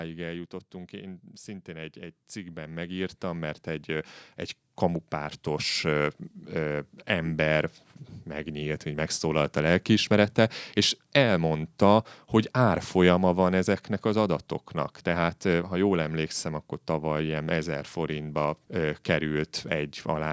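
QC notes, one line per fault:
0.91 to 4.17 s, automatic gain rising: over about three seconds the level climbs steadily by about 12 dB as the gain control, having judged the input too quiet, raises its gain step by step. Speech and background noise swell together, which separates this from a speaker simply getting louder, and the slow, one-way climb with no drop back marks it apart from compression pumping, which dips and recovers quickly.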